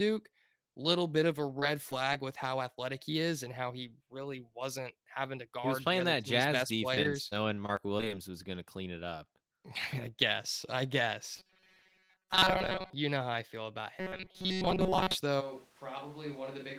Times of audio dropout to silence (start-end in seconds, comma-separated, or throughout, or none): none